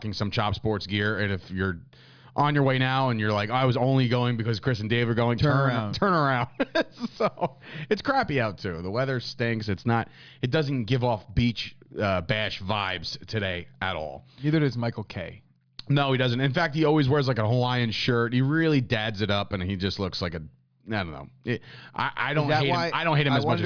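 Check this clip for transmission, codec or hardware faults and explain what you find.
Nothing in the recording points to a transmission, codec or hardware problem. The sound carries on without any break or disturbance that would need explaining.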